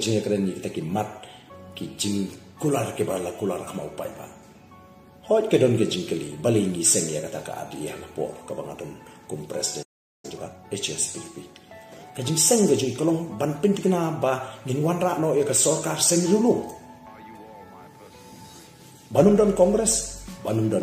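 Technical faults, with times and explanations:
9.82–10.25 s, playback stall: the sound cuts out mid-flow and leaves roughly 0.41 s of dead silence before resuming. The player likely ran short of buffered data or its output thread was blocked, so nothing reached the output until it recovered.
10.25–10.65 s, time-compressed catch-up: right after the gap the audio rushes forward at about twice normal speed, pitch unchanged. The player is trimming its backlog by removing short slices and cross-fading the joins.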